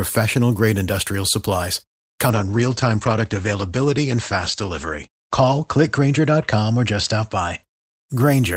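Right after "grade industrial supplies", at 2.3 s, there's a call bitrate drop that lasts until about 7.7 s. The bandwidth estimate fell and the encoder got squeezed, which sounds like a slide from roughly 32 kbps down to around 13 kbps. The top end gets chopped from 20 kHz to 8 kHz, so the speech goes muffled and rough and watery, and it sits at its worst for about 2.8 s before recovering.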